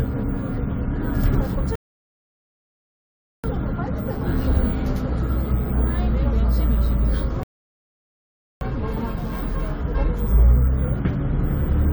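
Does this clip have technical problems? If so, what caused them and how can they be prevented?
Yes. Two rebuffering stalls occur: the player ran out of downloaded audio at 1.75 s and at 7.43 s and went silent until more data arrived, resuming seamlessly at 3.44 s and 8.61 s, adding about 1.7 s and 1.2 s. Each appears as a flat waveform line and a blank spectrogram band. A larger playback buffer or adaptive-bitrate streaming would prevent them.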